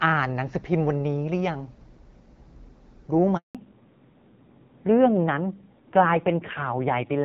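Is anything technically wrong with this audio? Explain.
Yes, there are two faults.

Handover gap, 3.37 to 3.55 s: the speech cuts out for about 180 ms because no speech frames arrived while the call switched networks.

Fallback to narrowband, 3.55 s to the end: after the gap the speech turns duller and rougher, with nothing above 4 kHz. The call has dropped from HD Voice to an older narrowband codec. Before the switch, the audio fits AMR-WB at 12.65 kbit/s, with light codec damage. After the switch, it fits AMR-NB at a low rate around 5.9 kbit/s.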